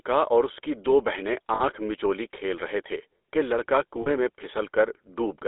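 A speech recording with a buzzy, gravelly roughness throughout and a narrow telephone band, roughly 300 Hz to 3.6 kHz, with nothing above. This is the GSM full-rate codec, consistent with 13 kbps, which models the vocal tract and excites it with a sparse, regularly spaced pulse train. At 1.54 to 1.62 s, just after "اس کی دو بہنیں", and at 4.02 to 4.09 s, after "رہے تھے کہ لڑکا", the sound briefly freezes into a rough, metallic ring. These are lost GSM frames: the decoder repeats the last good frame's parameters, which fits about three and two dropped 20 ms frames.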